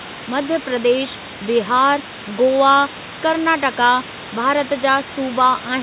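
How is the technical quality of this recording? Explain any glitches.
No real problems to point out here, just the low room noise sitting about 16 dB under the speech and the top end stopping at 4 kHz, which is simply what a G.711 A-law call link at 64 kbps does to the sound.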